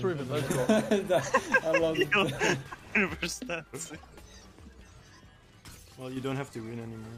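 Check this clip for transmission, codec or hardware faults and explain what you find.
One fault: from 3.33 to 6.17 s the sound and its background noise drop together by about 6 dB, a sudden gain jump, likely a digital gain change applied without any ramp.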